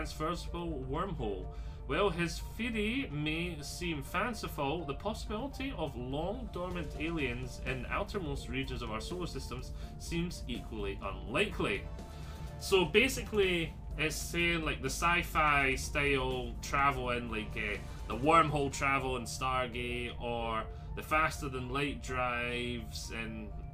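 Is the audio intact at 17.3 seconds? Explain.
Yes, the audio is intact at 17.3 seconds, with no dropout, glitch or other fault at that moment.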